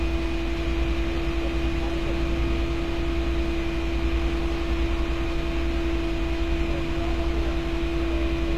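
Everyday sound, with plainly audible codec damage throughout. The treble has a gritty, metallic edge and stops dead near 14.9 kHz. That points to HE-AAC compression, likely at about 24 kbps. Spectral band replication rebuilds the upper band from copied lower bands.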